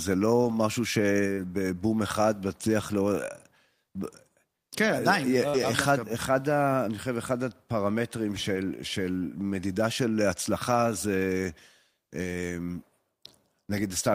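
Speech runs through a string of packet-loss repairs of two distinct kinds.

The first is a lost packet rebuilt from error correction, from 0.43 to 0.53 s. For about 60 ms the decoder plays the low-bitrate backup copy carried in the following packet, which fits three lost 20 ms packets. Nothing drops out, but the sound turns briefly rougher and grainier. That continuity with degraded texture is what separates it from concealment.

At 1.33 to 1.39 s comes short concealed packet loss. About 40 ms never arrived, and the receiver extended the preceding sound to cover it before blending back. The result is a short smear or wobble where the real sound is replaced rather than merely coarsened.

A 60 ms error-correction rebuild follows immediately, from 1.37 to 1.47 s, so the two overlap into one longer disturbance.

At 2.79 to 2.85 s a 40 ms stretch is rebuilt from error correction, consistent with two packets.

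The pairing repeats at 5.49 to 5.56 s, with a concealed 40 ms gap smeared over. It runs straight into a 60 ms rebuild from 5.54 to 5.64 s.

Single-packet rebuilds of 20 ms each fall at 7.04 to 7.06 s, 8.56 to 8.58 s and 10.72 to 10.74 s. They are heard only as momentary roughness with no break in the sound.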